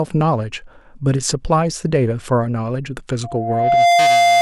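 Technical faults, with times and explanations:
3.23–4.41 s, loudspeaker feedback squeal: a steady 695 Hz tone swells within about a second to rise above the speech, as the microphone keeps re-amplifying its own loudspeaker.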